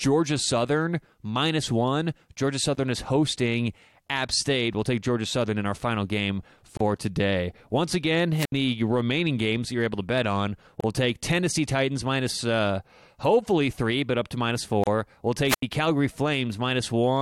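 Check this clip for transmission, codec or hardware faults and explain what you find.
Two kinds of fault are present: regular short gaps where separately encoded pieces were joined, and two wireless microphone squelch dropouts.

Gap at a join of encoded pieces, at 2.75–2.77, 6.77–6.80, 10.80–10.84 and 14.84–14.87 s. Continuous speech briefly stops for about 21 ms at the first join and 32 ms at the others, with smeared edges. The speech then resumes exactly where it stopped. The gaps fall every 4.0 s. The speech was encoded in separate pieces and joined without trimming, so each piece's start-up delay and padded final frame remain as silence.

Wireless microphone squelch dropout, at 8.35–8.52 s and 15.46–15.63 s. Hiss or static swells, the sound drops into near silence for about 71 ms and then about 81 ms, and the speech returns. The radio link from an analogue FM microphone faded until the receiver's squelch muted its output. 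When the signal recovered, the squelch reopened.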